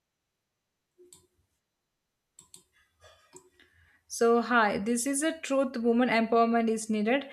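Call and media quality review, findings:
Nothing stood out on listening; no findings to log for this speech clip.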